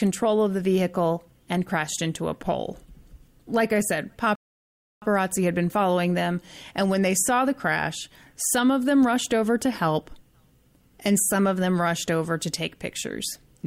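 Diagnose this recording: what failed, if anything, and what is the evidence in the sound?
Playback stage, rebuffering stall: after "I said" the speech drops to silence from 4.35 to 5.02 s, then resumes intact at "had been following them", adding 0.67 s.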